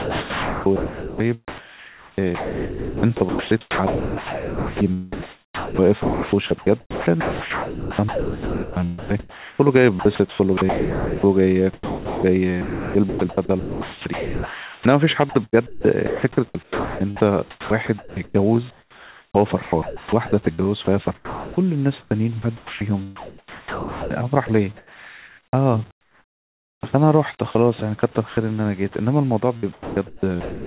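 Speech carried over a call path whose G.711 A-law coding at 64 kbps leaves nothing above 4 kHz, and the sound is chopped by the voice detector in three stretches: 0.0–26.83 s, with about 16.3 s swapped for comfort noise; 27.51–28.37 s, losing 0.14 s; and 29.57–30.66 s, losing 0.71 s. Quiet syllables and word edges drop out, likely from the sender's detector repeatedly gating transmission.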